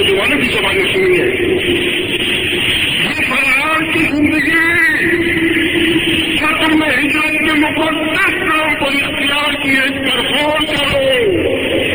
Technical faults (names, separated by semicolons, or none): imaging from linear upsampling